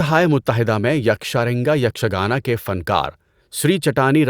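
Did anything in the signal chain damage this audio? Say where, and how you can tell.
No, nothing along the chain audibly damages this speech recording at any stage.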